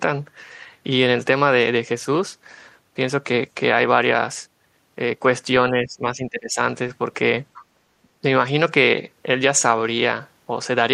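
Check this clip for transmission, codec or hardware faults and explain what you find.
Two echo-canceller faults affect the speech, clustered between 5.7 and 8.1 s.

Speech suppressed in double talk, 5.71–6.58 s, 7.75–7.80 s and 8.03–8.08 s: the canceller likely could not separate the talker from the overlapping loudspeaker echo and attenuated everything, dipping the speech by about 15–25 dB.

Other side's voice leaking through, 7.54–7.64 s: residual loudspeaker echo likely escaped cancellation, leaving a brief faint second voice about 25 dB below the talker.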